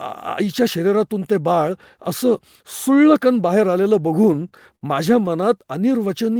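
Speech clip with repeated stalls (stutter) from 4.33 to 4.83 s: four times the jitter buffer ran dry and the last sound was held over, 100 ms in total, with nothing lost.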